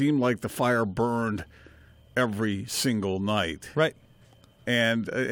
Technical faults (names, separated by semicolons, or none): crude rate conversion